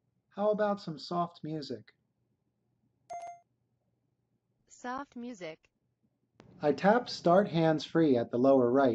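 No technical faults are audible.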